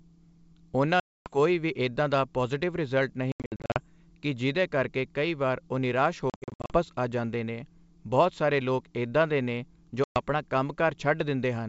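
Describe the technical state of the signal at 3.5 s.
Packet loss on the ADPCM call hits 3.32 to 3.79 s: 300 ms goes missing in gaps up to 80 ms long, and the decoder's predictor and step size drift from the sender's. Speech drops into hard-edged silences, then returns slightly distorted.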